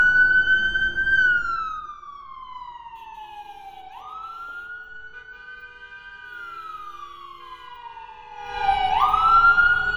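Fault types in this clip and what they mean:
zipper noise: A rapid ticking, like a zip being drawn, rides on the sound as it drops about 20 dB from 1.24 to 2.0 s and climbs back from 8.32 to 8.66 s. The gain moves in unsmoothed 1 dB jumps, around fifty a second, each leaving a click.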